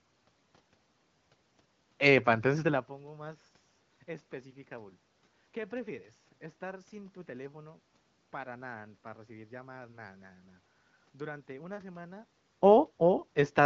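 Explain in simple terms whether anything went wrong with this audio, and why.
Nothing went wrong here; this audio has no faults.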